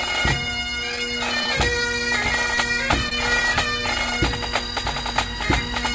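Short concealed packet loss at 1.44, 2.55 and 3.09 s: about 20 ms of audio failed to arrive each time, so the receiver extended the preceding sound and blended back, leaving brief smears or wobbles.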